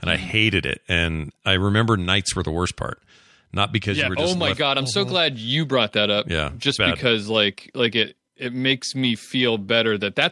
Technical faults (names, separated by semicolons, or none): none